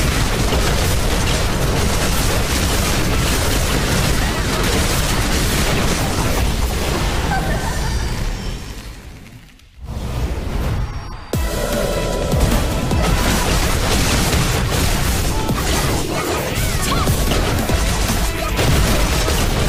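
No audible technical faults.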